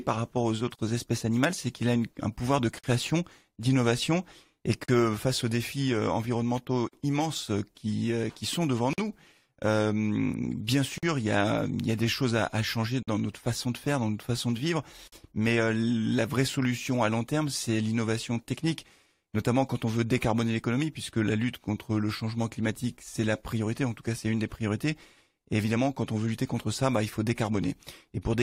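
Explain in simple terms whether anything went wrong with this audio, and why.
Gaps at joins of encoded pieces occur at 0.75, 2.79, 4.84, 6.88, 8.93, 10.98, 13.03 and 15.08 seconds, roughly every two seconds. The first is about 34 milliseconds long and the rest about 48 milliseconds. The audio was compressed in separate chunks and then stitched together. Each chunk kept the short silence the encoder adds at its start and the padding at its end, so the sound briefly drops out at every seam before carrying on where it left off.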